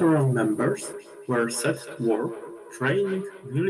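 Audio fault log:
0.45 s to the end, feedback echo between two devices: the speech keeps coming back roughly every fifth of a second, peaking about 15 dB under the voice, because a second device in the room replays the call and the first mic picks it up past its own echo canceller.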